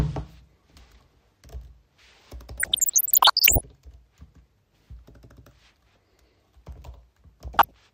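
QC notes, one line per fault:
2.60–3.61 s, DAB burbling: bit errors slipping past error correction make single sub-bands jump in level frame by frame, giving bubbling, chirpy squelches. On a spectrogram they show as scattered bright rectangular tiles.
7.48–7.71 s, DAB burbling: a shorter, milder burst, pointing to a lighter error rate. Fewer, sparser blocky sub-band flashes appear on the spectrogram, with small irregular level jumps in the waveform.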